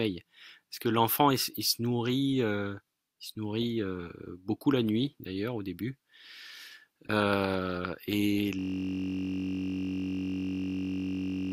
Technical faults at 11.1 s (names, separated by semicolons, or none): system hang loop